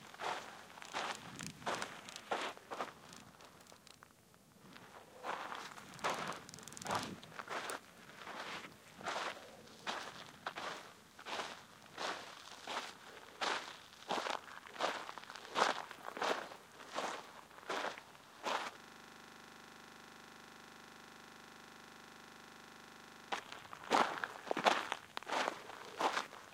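An everyday sound recording in which the system hangs from 18.80 to 23.32 s, leaving the audio hardware replaying one 40 ms buffer, heard as a steady 25 Hz buzz.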